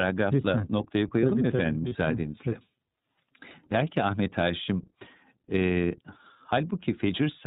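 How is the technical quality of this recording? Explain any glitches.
The quality is limited: the whole recording passes through the iLBC codec, and one short dropout occurs.

The iLBC codec affects the entire clip. It cuts everything above 4 kHz and codes each frame independently, which leaves the speech intelligible but slightly rough and synthetic. The damage is plainly audible. On a spectrogram the energy stops abruptly at 4 kHz, consistent with iLBC's 30 ms mode at around 13.3 kbps.

Lost iLBC frames occur from 1.89 to 1.93 s, where about 30 ms of audio, one frame, went missing. The decoder filled the gap by repeating the last pitch cycle mixed with noise, which sounds like a brief held, buzzy vowel. The waveform shows a short run of near-identical repeated periods, and normal speech returns immediately afterward.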